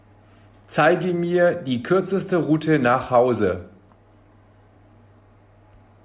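No technical faults are audible.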